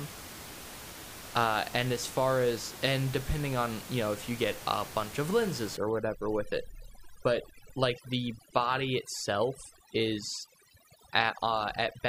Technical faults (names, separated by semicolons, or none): overdone noise removal